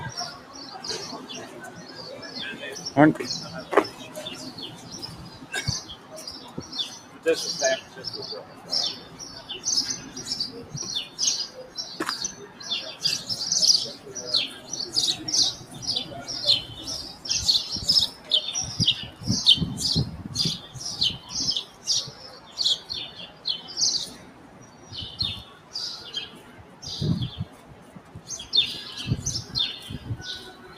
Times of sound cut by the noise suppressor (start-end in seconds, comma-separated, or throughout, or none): 0.32-2.28, 3.64-12.60, 13.97-15.74, 17.14-19.22, 20.63-28.28, 30.53-30.77